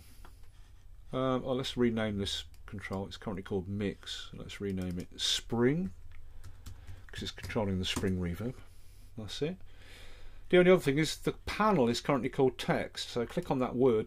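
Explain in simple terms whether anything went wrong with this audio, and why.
Nothing went wrong technically here: the signal holds steady throughout, with no gaps, jumps or sudden changes at any point.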